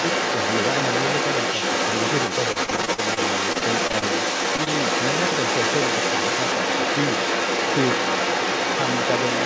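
From 0 to 9.5 s, a second voice runs under the talker at roughly the same loudness or louder, likely the other side's voice leaking through from a loudspeaker past an incomplete echo canceller.

Between 2.52 and 4.04 s the sound turns choppy and robotic. This is repeated packet loss: a dozen or so holes, the longest 44 ms, were each patched by extending the previous sound, covering about a fifth of that stretch.

At 4.56 to 4.60 s and again at 4.64 to 4.68 s come two brief smears. Each is a short concealed packet loss, where about 20 ms of missing audio was filled in from the preceding sound.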